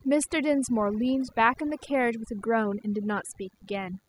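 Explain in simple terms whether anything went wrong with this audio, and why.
A thin, steady buzz sits under the speech for the whole clip: DECT cordless phone buzz, from a nearby cordless phone's radio bursts, 100 per second, picked up by the audio circuitry.

The background behind the speech also drops away and breaks up into twinkling specks. That is overdone noise removal, which cut away quiet parts of the voice along with the noise.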